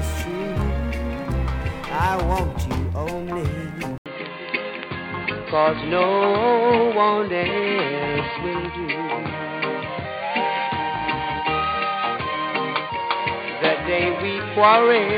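At 3.98 s an 80 ms silence is followed by a narrower, duller sound with nothing above 4.6 kHz, a faint new noise floor roughly 50 dB down, and unchanged level to the end, likely an input switched to a poorer device.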